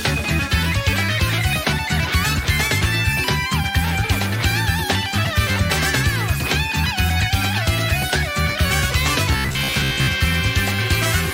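From 9.33 to 10.08 s there's robotic sound from repeated short buffers: a rigid 66.7 Hz buzz, likely from about 15 ms chunks looping over most of the audio.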